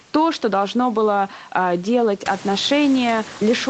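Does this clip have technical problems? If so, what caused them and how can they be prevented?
No, this speech clip has no technical problems.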